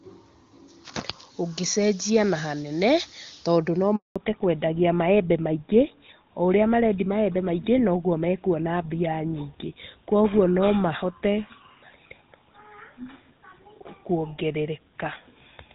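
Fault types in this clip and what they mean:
Handover gap: As the call switches networks, no speech frames arrive, so right after "na hanene tondũ no" the sound dies away within milliseconds and stays silent for 200 ms, 3.96 to 4.16 s. The waveform shows a flat line, the spectrogram a blank vertical strip.
Fallback to narrowband: From 4.16 s onward the call runs on an older narrowband codec, consistent with GSM full rate, so nothing above 4 kHz survives and the sound turns duller and rougher. The spectrogram shows a hard 4 kHz ceiling, where the earlier wideband audio reached higher.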